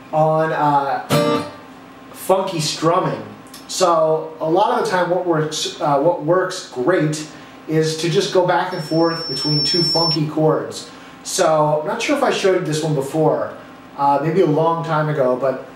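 From 8.71 to 10.19 s, loudspeaker feedback squeal: a 5.4 kHz loop tone swells over about a second to roughly signal level, a bright horizontal line on the spectrogram.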